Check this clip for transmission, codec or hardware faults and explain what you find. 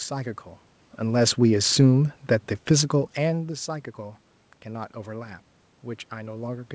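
One fault stands out: the level sags through the first half of the clip as the automatic gain falls.

Automatic gain falling, 1.0 to 3.49 s: the gain control judged the input too loud or its background noise too strong and pulled its gain down gradually, by about 4 dB over roughly two and a half seconds. The speech starts loud and then settles lower, and the room noise underneath drops by the same amount. That shared drop marks it as gain riding rather than the talker moving, since the whole signal sinks together. The speech content is band-limited at 8 kHz, consistent with a G.722 call path.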